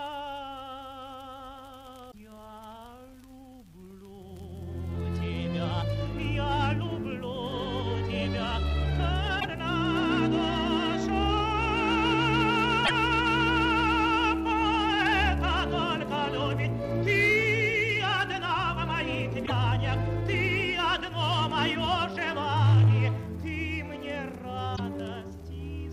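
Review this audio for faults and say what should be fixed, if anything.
Damaged data in a compressed stream causes brief disruptions at 2.08–2.15, 9.37–9.45, 12.82–12.91, 19.42–19.52 and 24.73–24.80 s, each under 0.1 s. At each point the decoder misreads corrupted frames, loses sync and hunts for the next valid header. The result is a chirp, squawk, click or short hole. Verify stream integrity with checksums or error-checked transport and re-fetch or re-encode from an intact source.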